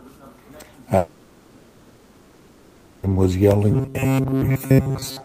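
From 0.97 to 3.08 s, the audio stream most likely stopped arriving, producing a long network dropout. With no new audio for about 2.1 s, the receiver fills the whole gap by extending the last sound into a fading buzz and hiss rather than true silence. When the audio resumes, about 2.1 s of speech is simply missing, along with a further piece of about 10 ms.

From 3.72 s to the end, new audio seems to arrive too seldom, so the playback keeps repeating a tiny buffer. This is likely robotic sound from repeated short buffers. The loops impose a fixed pitch of 134 Hz, which fits a buffer of roughly 7.5 ms, and most of this stretch is repeated material rather than fresh speech. The speech becomes a rigid, metallic buzz that only loosely tracks what is said.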